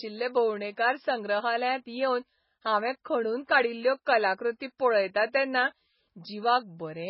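Throughout, the speech sounds watery and swirly, with nothing above 5.5 kHz. The likely cause is heavy MP3 compression, which fits a very low bitrate near 16 kbps. Short of bits, the encoder cuts the treble and drops weak frequency components frame by frame.

At 3.04 s, an attack is preceded by a short hiss lasting about 12 ms. This is pre-echo. The codec spread its noise across a whole block, so noise sized for the loud attack also filled the quiet moment just before it.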